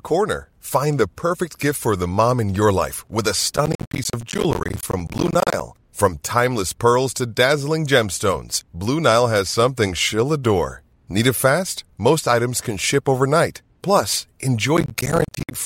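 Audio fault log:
3.56–5.61 s: processor overload crackle, starting just after "your life with a". Many short silent holes hit the speech in quick succession. The sound turns gritty and torn. Each hole has hard edges, so each one clicks. Their spacing fits buffers of around 10 ms, with dozens of deadlines missed in a row.
14.77–15.55 s: processor overload crackle again. The same silent holes tear the sound, this time more briefly. The crackle stops when the overload passes.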